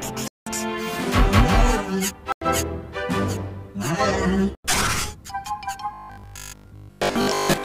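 At 0.28–0.46 s, 2.32–2.42 s and 4.55–4.64 s, blocks of digital silence of about 186, 93 and 93 ms drop the sound abruptly. The lengths fit unfilled 8192- and 4096-sample buffers.

From 5.94 s to 7.64 s the audio turns into a rigid 50 Hz metallic buzz, likely robotic sound from one 20 ms buffer repeated in place of most of the real audio.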